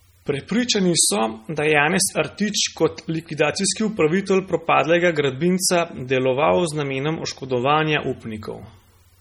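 The speech runs through heavy MP3 compression from start to finish. Weak frequency components drop in and out from frame to frame, giving a watery, swirling texture, with metallic chirps on the s sounds and smeared consonant attacks. The depth of the damage fits a bitrate around 32 kbps, too few bits for the encoder to keep anything beyond the strongest detail, which is the likely cause.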